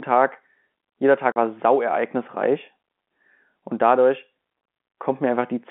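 At 1.32 s the speech drops into a 40 ms hole with hard edges, right before "war sau ereignisreich": packet loss filled with silence, which fits two 20 ms packets.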